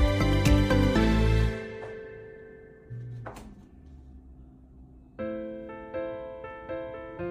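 No technical faults can be heard anywhere in this audio; the signal stays intact and continuous throughout.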